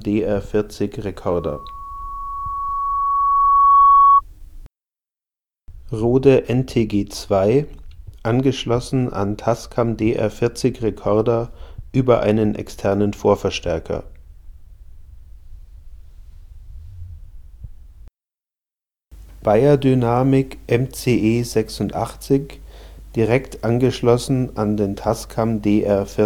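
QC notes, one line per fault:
1.35–4.21 s, loudspeaker feedback squeal: a single tone near 1.1 kHz swells out of the audio over roughly two seconds and ends up around 10 dB louder than everything else. A microphone is picking up the loudspeaker it feeds. At this one frequency the loop gain exceeds one, so the tone keeps feeding itself and growing. It stops at 4.21 s.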